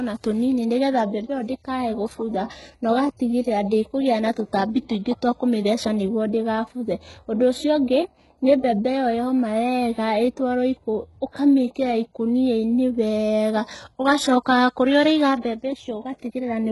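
From start to finish, the speech carries heavy codec damage. This is most likely HE-AAC compression at a very low bitrate, which fits roughly 12 kbps. Only the lower spectrum is truly coded. The treble is rebuilt by copying lower bands upward under a coarse envelope. So the top end sounds synthetic. Its harmonics do not match those below the crossover. S sounds turn gritty and lispy. Nothing reaches above 11.5 kHz.

At 11.32 s a pre-echo appears, running to about 11.35 s. A sharp attack lands late in a transform block. The coder spreads its quantisation noise across the whole block. Noise sized for the loud attack therefore fills the quiet gap before it. A short hiss leads the onset by about 32 ms. The attack itself sounds softened and smeared rather than crisp.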